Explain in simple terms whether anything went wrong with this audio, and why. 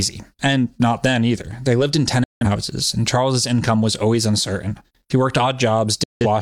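Two digital broadcast dropouts interrupt the speech, from 2.24 to 2.46 s and from 6.03 to 6.26 s. Each time the sound fades out within a few milliseconds and goes silent because the receiver muted on bad or missing frames. Whatever was said during those gaps is gone.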